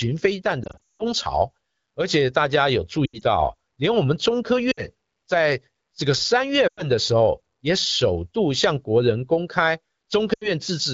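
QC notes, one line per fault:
0.63 to 1.03 s, 3.05 to 3.23 s, 4.71 to 4.81 s, 6.67 to 6.85 s, 10.33 to 10.49 s: lost AMR speech frames. Radio errors corrupted frames, so the decoder repeated the last good pitch and vocal tract settings with falling gain. Losses total about 260, 100, 60, 100 and 80 ms. The first and second are scattered, with runs of up to 180 and 80 ms. These sound like brief warbles or sound dropping to near silence within two frames in this clear wideband speech. The speech returns briefly weak or rough.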